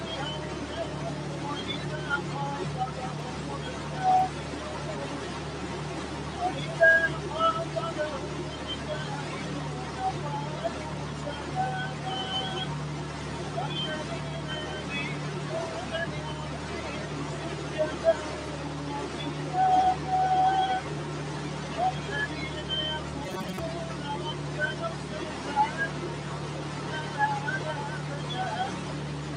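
The whole clip has a noise suppressor applied to music or sounds, a speech-oriented processor treating sustained tones, ambience and reverb as noise and pulling them down by roughly 5 dB. Attacks come through fine, but held parts and tails keep sinking, so the sound pumps and thins throughout. Then from 23.25 to 23.59 s there's a hard, metallic robotic sound from repeated short buffers, likely because the audio arrived too slowly and a fragment of about 5 ms was looped to fill the gaps, stamping a fixed 188 Hz buzz on everything while around half the real material got skipped.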